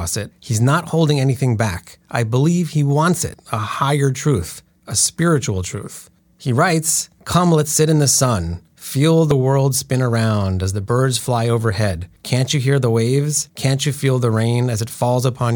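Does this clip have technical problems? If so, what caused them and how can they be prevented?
Yes. The speech skips abruptly at 3.34 s and again at 9.31 s, each time losing roughly 30 ms, with the two sides butted together and no silence between them. The six-second spacing suggests audio missing between chunks, likely from a recorder or processor that drops a sliver while closing one block and opening the next. A waveform shows a sudden jump in level, and a spectrogram shows a sharp vertical seam where the patterns fail to line up. Buffering continuously across chunk boundaries, with overlap, prevents it.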